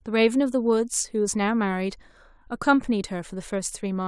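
Nothing here calls for comment, since no technical faults turn up anywhere in this bit of speech.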